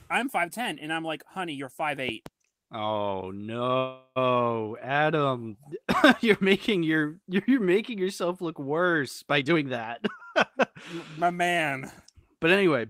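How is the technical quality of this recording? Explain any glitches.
The recording has three kinds of glitches: a double pop, a brief freeze, and two stretches where the speech is sped up.

Loud pop: Right after "you're five", between 2.09 and 2.29 s, there are two sharp pops about 5 dB above the speech, which carries on underneath. That's likely a voltage spike from a plug, switch, static or driver glitch getting into the signal.

Call audio freeze: From 3.77 to 4.18 s the audio stalls. The last sound is stretched into a fading buzz for about 385 ms, with the final 50 ms going silent. Then it resumes exactly where it left off, so nothing's lost, just 385 ms of extra delay. The likely cause is delayed packets draining the jitter buffer.

Jitter buffer speed-up: Just after "yourself look worse by", from 9.41 to 11.64 s, the speech runs at 111% speed with normal pitch and sounds a bit hurried. 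Roughly 300 ms gets trimmed out in tiny pitch-period slices. A milder 107% stretch follows from 12.07 to 12.88 s, cutting about 70 ms. In both cases the buffer was shedding backed-up audio to bring the delay down.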